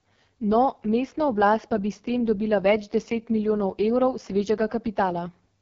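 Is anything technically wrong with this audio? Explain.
Yes. Throughout the speech runs through an AMR wideband (HD Voice) codec at what sounds like its lowest rate, which fits 6.6 kbit/s. The vocal tract model gets too few pulses. So the speech turns rough and raspy. Nothing reaches above 7 kHz.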